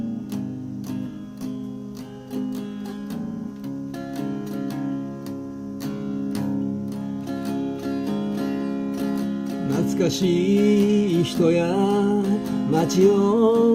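No technical faults can be heard anywhere in this clip.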